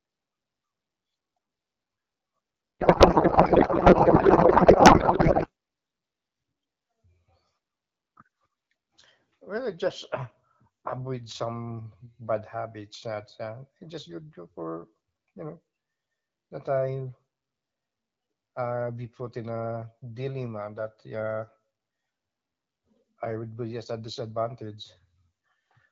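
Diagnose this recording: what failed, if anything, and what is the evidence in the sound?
A codec payload misread hits the speech from 2.80 s to 5.48 s. For about 2.7 s the speech gives way to garbled noise and warble that barely tracks it. The stage is the codec interface. The AMR-WB frames were packed octet-aligned but unpacked as bandwidth-efficient, so every field is read from shifted bit positions. The decoder accepts these as valid frames and synthesises nonsense until the packing agrees again. The clear wideband speech on either side fits AMR-WB at around 12.65 kbit/s.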